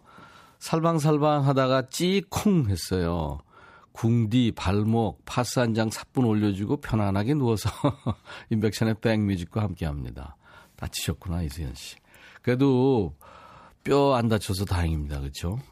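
Speech, with no technical faults to point to anywhere in the recording. Nothing in the audio calls for a time or a cause.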